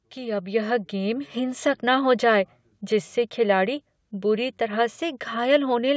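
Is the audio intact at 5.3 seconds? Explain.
Yes, the speech at 5.3 seconds is intact, with nothing there beyond the ordinary call microphone processing, which limits the sound to about 8 kHz and trims the lowest bass as a normal part of that path.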